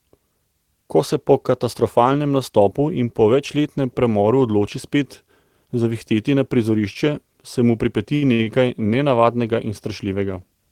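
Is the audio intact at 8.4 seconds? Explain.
No. Two short stalls from late packets fall right around that point, one from 8.34 to 8.41 s and another from 8.43 to 8.48 s. Each time the jitter buffer emptied, so the receiver stretched the last bit of speech, for 52 ms and then 36 ms, until the packet arrived, and resumed where it left off. You hear a sound held unnaturally long, with a faint buzz or dip. Unlike a dropout, nothing is lost; the speech simply runs later afterwards.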